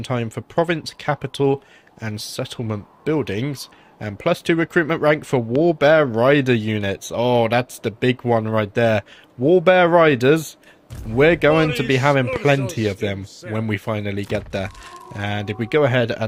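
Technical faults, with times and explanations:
5.56–5.58 s and 12.36–12.38 s: loud pop. A single sharp pop sits on top of the sound at each time, and the sound carries on underneath. Each lasts about 24 ms. The first peaks roughly 5 dB above the surrounding level, and the second, louder one roughly 10 dB above. The likely cause is a sudden voltage step or spike, from a switch, plug, static discharge or driver glitch, which the following circuitry turned into a brief click-like thump.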